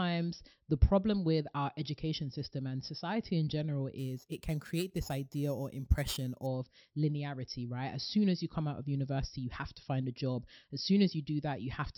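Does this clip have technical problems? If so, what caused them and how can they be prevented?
Yes. From 3.98 to 6.46 s, just after "and society in general", there is imaging from sample-and-hold upsampling. The audio was converted from 12 kHz to 48 kHz by repeating each sample with no smoothing filter, so mirrored copies of the spectrum appear above the original 6 kHz limit. The lowest copy fills 6 to 12 kHz at about 19 dB below the speech. It sounds like a bright metallic fizz that rises and falls with the speech level.

To prevent it, upsample with a proper interpolation low-pass filter that removes everything above 6 kHz instead of simply holding each sample.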